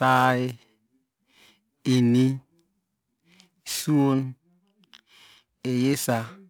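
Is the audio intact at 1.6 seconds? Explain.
No. Periodic clock jitter runs throughout the clip, including 1.6 s: a clock wobble near 2 kHz adds rough, metallic sidebands flanking each harmonic on a spectrogram.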